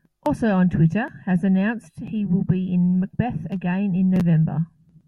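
No technical faults can be heard anywhere in the recording. The speech runs its full course with nothing in the signal chain audibly going wrong.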